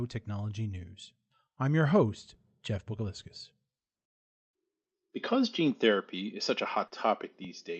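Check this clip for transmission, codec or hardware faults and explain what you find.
One transmission fault appears, in speech carried over an Opus call path whose top end stops at 8 kHz.

Short concealed packet loss, 6.87 to 6.94 s: about 40 ms of audio arrived too late, and the decoder extrapolated the preceding sound over the gap, leaving a brief smear.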